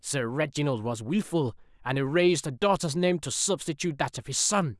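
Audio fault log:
No technical faults are present in this speech recording.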